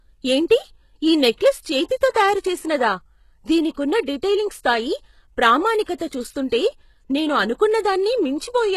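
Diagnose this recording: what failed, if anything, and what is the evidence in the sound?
The codec stage is the likely culprit: HE-AAC compression running at a very low bitrate, something like 16 kbps. The treble is synthesised from copies of the lower bands, so the s sounds come out gritty and metallic, and nothing at all is present above about 12.3 kHz.

That same codec also produces pre-echo. There's a short hiss smeared ahead of attacks at 1.35–1.41 s (about 54 ms), 5.84–5.88 s, 5.98–6.00 s and 6.08–6.11 s. Quantisation noise sized for each loud onset spreads back through its transform block, softening the attack.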